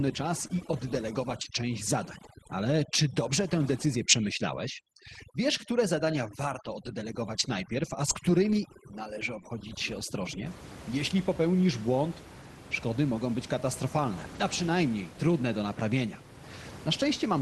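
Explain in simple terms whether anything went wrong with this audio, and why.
Three separate problems can be heard.

From the start to 10.46 s, overdone noise removal is at work: the noise reduction was set too strong, so it switched off frequency bands near the background level. The room noise drops and breaks up into twinkling specks.

Between 0.47 and 0.51 s there is a short concealed packet loss. About 20 ms of the call arrived too late, and the receiver papered over the hole by extending the preceding sound before blending back in, leaving a brief smear or wobble.

At 12.71 s, and again from 14.35 to 14.41 s, there is a lost packet rebuilt from error correction. The missing audio was replaced from a rough backup copy carried in the next packet, so nothing drops out, but those moments sound grainier and noisier. The longer 40 ms patch fits two lost packets.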